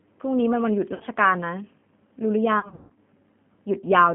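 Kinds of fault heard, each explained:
G.729 codec: Throughout the clip, the speech is squeezed into a line band of about 150 Hz to 3.4 kHz at 8 kbit/s. It is rebuilt from a vocal tract filter, a pitch predictor and a few pulses per frame, so it sounds plainly rough and synthetic.
VoIP packet loss concealed by the speech codec: At 0.94–1.04 s (about 60 ms missing) and 2.60–2.97 s (240 ms missing across 360 ms, longest gap 150 ms), the decoder stretches its last pitch and filter into a fading buzzy tone or coloured noise, and the speech stays weakened afterwards.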